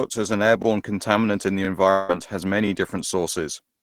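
From 0.62 to 0.65 s, between "as an" and "contaminant in the", overlapping chunks replay about 25 ms of speech at a join. This is heard as a brief stutter rather than a gap, consistent with 1 s chunks. From 1.90 to 2.10 s, just after "contaminant in the", a fading buzz stands in for about 180 ms of missing speech with no true silence. The speech resumes with that material lost, not repeated, the likely result of a long network dropout.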